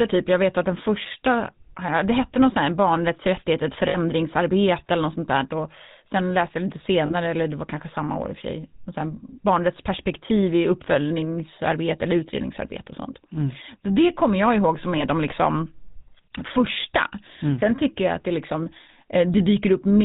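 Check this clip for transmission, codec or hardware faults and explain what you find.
Two faults are present: GSM full-rate codec damage throughout the speech, and lost GSM frames at three points.

The GSM full-rate codec colours the whole clip. It models the voice as a filter excited by sparse, regularly spaced pulses, and discards everything above 4 kHz. The result is plainly audible: a dull, buzzy, gravelly roughness, which fits a 13 kbps full-rate coder.

Lost GSM frames occur at 3.88 to 3.97 s (60 ms), 7.06 to 7.14 s (40 ms) and 14.98 to 15.04 s (20 ms). The decoder fills each gap by repeating the last good frame's settings. Each gap sounds like a brief, rough, metallic ring.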